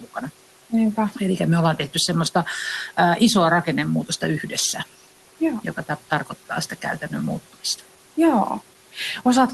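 At the very start, from 0.0 to 0.16 s, the noise suppressor mistook the opening of the speech for background and clamped down on it, a case of speech cut by the noise suppressor. The gain drops by up to about 10 dB across roughly a tenth of a second, so the first sounds come through faint and swallowed, sinking toward the level of the room noise, which sits about 21 dB below the speech, before full level returns.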